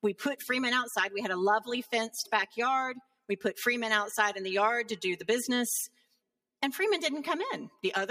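A noise suppressor built for speech runs across the whole clip. It treats steady tones and fading tails as noise. Held sound sinks while sharp onsets pass. The level pumps by roughly 5 dB, so the sound thins and flutters.

From 3.0 to 3.29 s, the sound is cut by the noise suppressor. It drops by about 22 dB, and its decay is chopped short. It happens again from 5.88 to 6.2 s, with a dip of about 18 dB.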